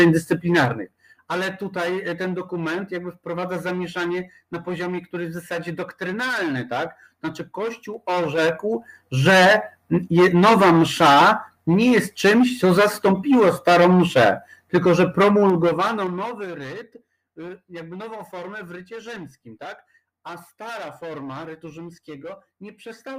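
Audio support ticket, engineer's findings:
Zipper noise at 0.30–1.15 s, 7.72–9.30 s and 15.40–16.64 s: ticking rides on the level moves (down about 10 dB, up about 10 dB, down about 20 dB). The gain stage applies unsmoothed 3 dB steps, a few per second, and each step clicks.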